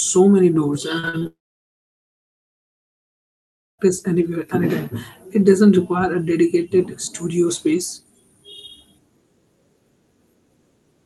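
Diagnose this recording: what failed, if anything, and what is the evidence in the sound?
The fault sits at the network stage as repeated packet loss, heard as robotic sound between 0.99 and 1.27 s. Five short gaps, the longest about 42 ms, land within that quarter second, and concealment fills roughly half the span by continuing the last sound. The result is choppy. A spectrogram shows short frozen, smeared harmonic blocks alternating with real speech. On the waveform, near-identical periods repeat at each patch.

The packet losses run straight into a long network dropout from 1.27 s to 3.81 s, about 2.5 s with no new audio, likely a network outage. The receiver briefly stretches the last sound into a fading buzz or hiss, then leaves about 2.4 s of silence before speech resumes with that stretch simply gone. On the spectrogram this appears as a short decaying smear followed by an empty column below the 12 kHz ceiling of the Opus call path. 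The waveform goes flat across the same span.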